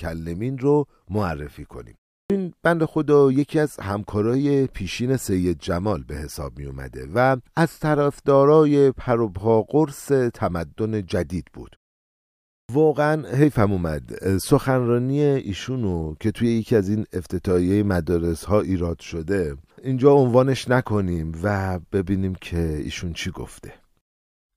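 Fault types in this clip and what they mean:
Clipped start after a pause: the output device drops into a low-power or unlocked state during silence and takes time to come back, so the opening of the next speech is lost. Here about 70 ms vanishes at 2.23 s, after a 0.33 s pause, and again at 12.62 s, after a 0.94 s pause. On a waveform the sound jumps from flat silence straight to full amplitude. A spectrogram shows a hard vertical edge where onset energy should build.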